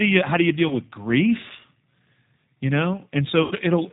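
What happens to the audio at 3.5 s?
From 3.43 to 3.54 s, VoIP packet loss concealed by the speech codec: about 80 ms of speech went missing, consistent with eight 10 ms frames. The decoder extended its last pitch and filter state at falling gain, so the speech turns into a fading buzzy tone or coloured noise and sounds weak or distorted as it recovers. Throughout, the G.729 codec at 8 kbit/s removes everything above 4 kHz and rebuilds the speech from a vocal tract model and sparse pulses, which makes it plainly rough and synthetic.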